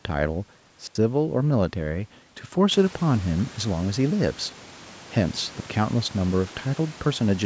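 The speech has two digital wireless dropouts. At 0.87 to 0.95 s the sound mutes for 82 ms. At 5.60 to 5.66 s it mutes for 60 ms. Each is a clean hole of near silence with no noise burst, where the receiver lost too much data and muted.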